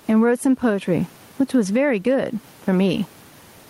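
Gain pumping runs through the whole clip: the room noise, about 40 dB below the speech, swells by around 15 dB in pauses and ducks under each loud syllable, likely from excessive input gain with a fast limiter.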